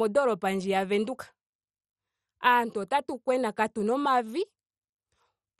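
Throughout the speech, the sound is dull, with nothing above about 13.9 kHz, and carries a heavy gurgling, granular distortion as upper bands flicker in and out. This is likely MP2 compression at a starved bitrate, roughly what 56 kbps would give, where sub-bands lose their bits and switch off while the rest are coarsely quantised. Unlike a plain low-pass filter, the top end pulses unsteadily and the remaining detail sounds grainy rather than clean.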